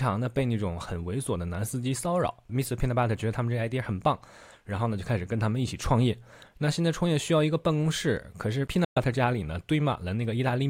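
Bluetooth dropout at 8.84 to 8.98 s: the speech cuts abruptly to silence, likely because late wireless packets were discarded, then resumes further along.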